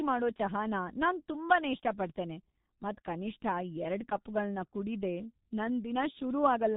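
G.723.1 codec damage runs through the whole speech clip. The narrow band points to that codec at a very low rate, around 6 kbit/s. Its coarse 30 ms frames and slowly updated voice model leave the speech heavily muffled and hoarse, with smeared consonants and nothing above 4 kHz.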